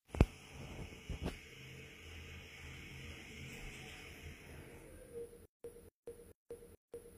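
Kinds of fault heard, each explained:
HE-AAC compression: The treble sounds rebuilt rather than captured. It is plainly gritty and metallic, with upper harmonics that don't sit naturally over the body of the sound, and nothing above 15.4 kHz. The likely cause is HE-AAC coding at a low rate, fitting HE-AAC v2 near 24 kbps. It keeps only the lower spectrum and fills the treble with copies of lower bands, shaped by a coarse envelope.
stutter with silent gaps: From 5.45 s to the end, one 243 ms fragment repeats four times. Each repeat is followed by 189 ms of silence, so the same burst returns every 432 ms at a mechanical, even pace. Whatever should have played after 5.45 s never arrives. This likely comes from a stalled player or stream that replayed its last buffered fragment at each retry and then ran empty.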